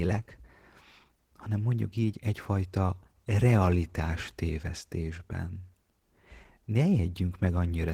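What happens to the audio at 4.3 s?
At 4.3 s the speech carries Opus voice compression, which runs through the whole clip rather than starting there. The lower band goes through a linear-prediction coder with coarsely coded excitation, and a transform layer handles content above 8 kHz. The damage is plainly audible as a hoarse, slightly robotic texture that points to a bitrate around 16 kbps. Unlike a low-pass fault, the top end is not cut off; the damage lies in the grain of the sound.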